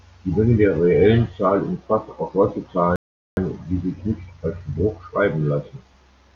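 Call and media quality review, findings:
Rebuffering stall, 2.96 to 3.37 s. Speech drops to silence for 0.41 s, then resumes exactly where it stopped. Nothing lost, time added. Probable component: player buffer. Downloaded audio ran out, so playback paused until more data arrived.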